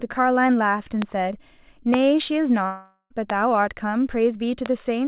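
Speech over a narrowband call path with nothing above 4 kHz, consistent with G.711 mu-law at 64 kbps, marred by four loud pops and one long network dropout. The pops land at about 1.02, 1.94, 3.30 and 4.66 s. Each is a single sharp thump around 20 ms long, peaking roughly 15 dB above the speech, with the talking continuing underneath. On a waveform each is a tall isolated spike. On a spectrogram it is a thin vertical stripe running through the whole band. The likely cause is a voltage step or pulse from a switch, plug, static or driver glitch. The dropout runs from 2.66 to 3.12 s, where about 440 ms of audio never arrived. The receiver filled the gap by stretching the last sound into a fading buzz or hiss, ending in roughly 60 ms of silence before speech resumes with that stretch missing. A spectrogram shows smeared, repetitive bands decaying into a blank column, and the waveform shrinks to a flat line just before the return. 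This is most likely packet loss long enough to exhaust concealment.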